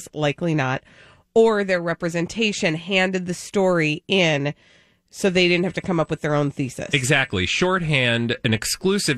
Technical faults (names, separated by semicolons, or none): USB whine